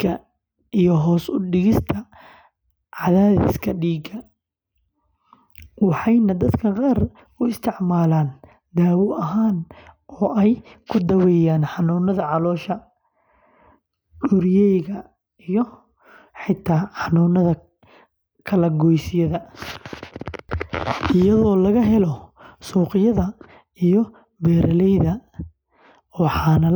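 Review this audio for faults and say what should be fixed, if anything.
No faults found in the speech recording; nothing needs fixing.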